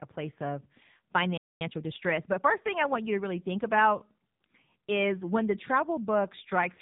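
Speech throughout sounds buzzy, thin and synthetic, with nothing above 4 kHz. This is heavy AMR narrowband mobile codec damage: the voice is rebuilt from a coarse vocal-tract model fed by sparse pulses, and the harshness points to a low bitrate of around 6.7 kbps. At 1.37 s the sound cuts out mid-flow and stays silent until 1.61 s, about 233 ms. This playback stall was likely caused by the player running dry or its thread being blocked. From 1.61 to 2.53 s the speech, which resumes just before "thing i want you", is hurried at about 1.25 times normal speed with its pitch unchanged. This is time-compressed catch-up, where the player trims its backlog by removing small slices and cross-fading the joins.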